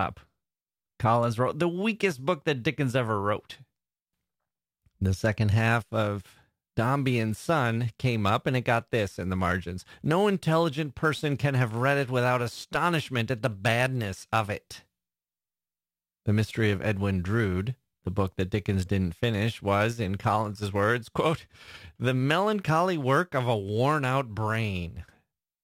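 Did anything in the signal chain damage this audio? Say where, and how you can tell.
Yes. From 5.59 s to the end, the speech carries a gritty, inharmonic fizz. It rides on the louder and brighter sounds and has no musical relation to them. This is crude rate conversion at the sample-format conversion stage. The pattern fits 48 kHz audio forced to 44.1 kHz by simply dropping the nearest samples, with no filtering. That regular skipping creates stray tones, roughly 30 dB below the speech.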